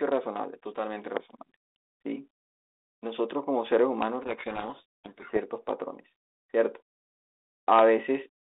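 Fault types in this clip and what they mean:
Loud pop: two brief pulses at 1.17 s and 4.02 s, about 15 and 10 dB above the speech, likely voltage spikes from a switch or static.
Codec payload misread: from 4.22 to 5.39 s the decoder takes G.726 code words in the wrong bit order, burying the speech in harsh distortion.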